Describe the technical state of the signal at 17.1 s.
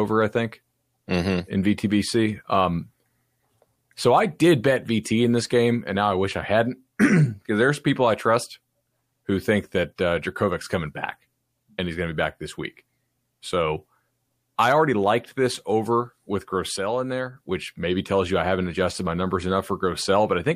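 A sudden gain jump spans 16.77 to 17.37 s: the level, background noise included, drops about 6 dB at once, likely from a gain setting applied without a ramp.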